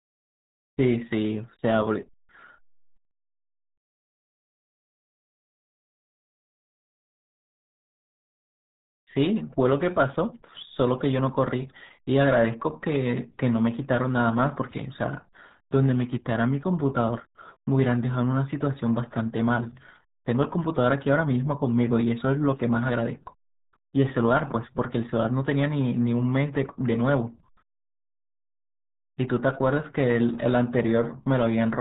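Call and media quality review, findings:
RealAudio 14.4 codec, throughout. Speech muffled and gargly, nothing above 3.8 kHz. Heavy codec damage: severe bit starvation, which fits an 8 kbit/s dial-up-era speech codec (RealAudio 1) discarding high band and smearing detail.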